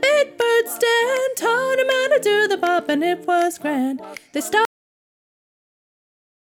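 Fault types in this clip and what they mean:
Cut-off end at 4.65 s: the final buffers of the recording were never written, so the sound halts abruptly mid-event with no natural decay and drops straight to digital silence, which then fills the remaining 1.8 s of the clip.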